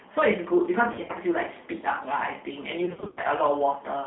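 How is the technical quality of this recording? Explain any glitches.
The technical quality is poor. The speech is narrowband and coded, with two bursts of concealed packet loss.

G.729 codec damage runs throughout. The sound is confined to roughly 200 Hz to 3.7 kHz, and the voice is plainly rough and synthetic. Speech is rebuilt from a vocal tract filter, a pitch predictor and a few pulses per frame, which fits 8 kbit/s G.729A. That synthetic texture distinguishes it from mere telephone band-limiting.

VoIP packet loss concealed by the speech codec occurs at 0.93–1.12 s and again at 2.86–3.27 s. About 90 ms and 230 ms are missing, scattered in runs of up to 40 ms. The decoder extrapolates its last pitch and filter at falling gain, so the gaps become fading tonal or noisy smears rather than silent dropouts, and the voice stays weak briefly afterwards.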